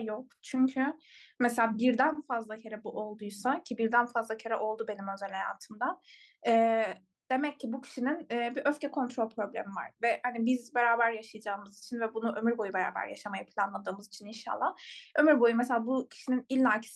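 Clock drift between sender and receiver runs through the whole of this speech clip: the sender's clock is roughly 4 percent fast, so the receiving buffer keeps overfilling. Repeated timing corrections follow from 0.01 to 16.82 s, as the receiver trims short pieces to keep pace with audio arriving at 104 percent speed, leaving slight, unevenly spaced hiccups.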